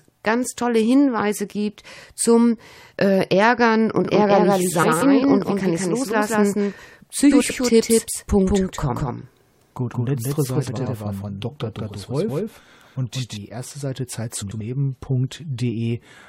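From 4.05 s to 13.37 s a doubled audio track runs underneath the speech: a full-band copy at roughly equal level, trailing by around 200 ms, with no reverberant tail, and it cuts in and out abruptly at both ends. The likely cause is a second, slower capture path being mixed in.

Frames out of order occur at 4.82–5.02 s, 7.31–7.51 s, 10.67–10.87 s and 14.41–14.61 s. Each time, two adjacent blocks of about 93 ms play swapped, which fits runs of four frames apiece, giving a brief garbled flutter.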